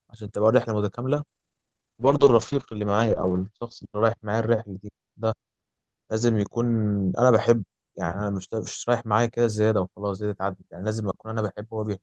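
A call bitrate drop runs from 1.19 s to 9.37 s in this speech recording. The connection's bandwidth estimate fell, so the encoder was told to spend far fewer bits; the coarser coding sounds consistent with a fall from roughly 32 kbps to about 8 kbps. At that rate the codec also trims the top end, pulling the audio bandwidth down from 20 kHz to 8 kHz, so the sound turns muffled and rough. The worst stretch lasts 2.06 s before the bitrate recovers.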